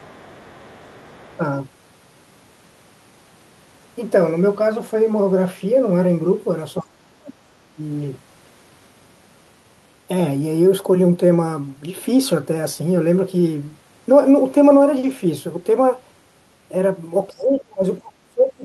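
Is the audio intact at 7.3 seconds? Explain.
No. Speech suppressed in double talk runs from 6.82 to 7.4 s, covering 7.3 s. The speech dips sharply, by around 30 dB at its deepest, for about half a second in total, likely because an echo canceller mistook simultaneous talk for echo and attenuated both.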